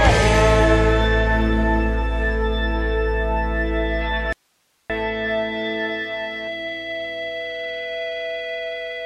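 A music clip with an audio dropout to a faint residue from 4.33 to 4.90 s: the music cuts abruptly for about 0.57 s, leaving only hiss roughly 45 dB down, likely a brief signal loss on a still-live path. The waveform collapses to a thin noise band; the spectrogram shows a sharp-edged, near-empty gap.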